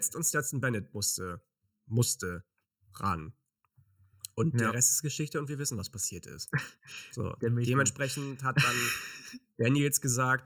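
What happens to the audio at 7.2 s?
At 7.2 s the speech sounds hollow and phasey, with a tubular colour that runs through the whole clip. This is channel delay (comb filtering): one channel trails the other by under a millisecond, so summing to mono cancels evenly spaced frequencies, starting near 700 Hz.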